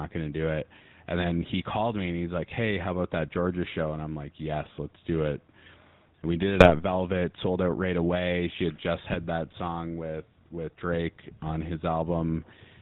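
Gain pumping runs throughout this speech recording: the gain swings by roughly 5 dB as louder sounds pull it down, likely from gain set too high with a fast limiter clamping it. GSM full-rate codec damage is also present throughout: a buzzy, gravelly roughness and nothing above 4 kHz, consistent with a 13 kbps vocal-tract model driven by sparse, regular pulses. GSM bit errors strike from 6.55 to 6.75 s, just after "we did". Corrupted filter, pitch or gain values across a few frames produce squawks, pops and gargling bursts.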